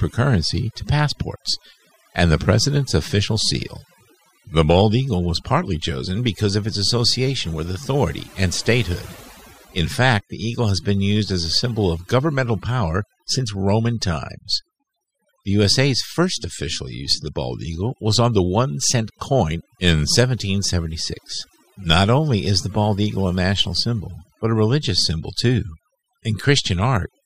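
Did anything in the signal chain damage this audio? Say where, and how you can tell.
Yes, at the processing stage: overdone noise removal runs through the whole speech clip. Gaps between phrases drop to near silence with twinkling specks. An over-aggressive suppressor is muting individual frequency bands near its noise estimate, taking quiet speech detail with them.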